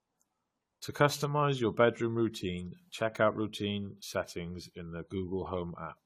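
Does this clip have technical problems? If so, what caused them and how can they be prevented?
Yes. Generation loss runs through the whole speech clip: it sounds swirly, smeared and hollow, consonant attacks are blurred, and nothing is left above about 17.6 kHz. The likely cause is repeated AAC-LC decoding and re-encoding, perhaps around seven passes, at a rate that fits roughly 64 kbit/s. Each pass requantises on a shifted frame grid, so noise and spectral gaps stack up beyond what one encode would leave. To prevent it, keep a lossless master for editing and encode to a lossy format only once, at the final step.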